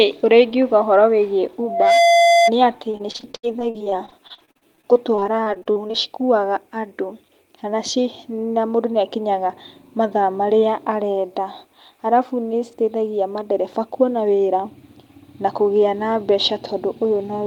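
Around 1.63 s a loudspeaker feedback squeal kicks in: the mic is hearing its own speaker, and a 686 Hz tone runs away, swelling over roughly a third of a second to sit a bit above the speech, about 5 dB, until it drops out at 2.52 s.

Then from 2.91 to 5.95 s there's repeated packet loss, giving that robotic sound. Dozens of short dropouts, the longest 75 ms, get patched by stretching the previous sound, so about a quarter of that stretch is filler and the speech turns choppy with pieces missing.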